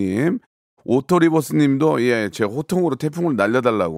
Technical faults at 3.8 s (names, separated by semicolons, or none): none